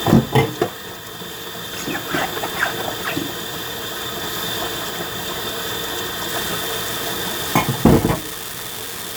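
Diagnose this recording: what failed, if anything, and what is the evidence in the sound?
A fault at the converter or its digital interface: an unreliable data bit. From 6.29 s to the end, a steady crackle sits over the sound and continues through quiet passages. One marginal data line flips its bit in random samples, each flip adding a fixed spike of about -13 dBFS.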